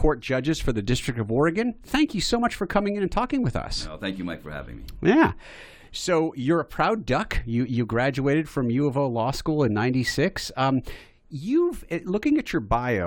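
No technical faults can be heard anywhere in the recording.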